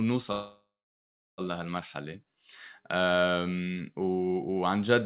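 Call audio freeze, 0.32 to 1.41 s: the last sound trails off as a fading buzz or hiss, then 0.7 s of silence, likely a starved jitter buffer. The speech then resumes with nothing missing.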